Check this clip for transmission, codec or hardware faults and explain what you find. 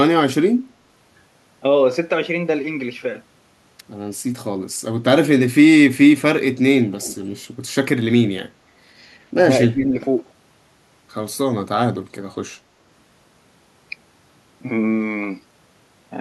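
Two faults show up in the speech, both tied to echo cancellation on a hands-free call.

From 7.00 to 7.26 s there is an echo leak: a faint delayed copy trails the voice by 235 ms, roughly 20 dB down. Likely cause: a loudspeaker-side echo canceller passing residue. A spectrogram shows weak, time-shifted harmonics; the waveform shows a small trailing ghost.

From 9.71 to 10.01 s the speech is suppressed in double talk, dipping by roughly 10 dB for about 300 ms. The likely cause is an echo canceller muting its own talker while both sides speak. The waveform envelope sags, and the spectrogram thins briefly.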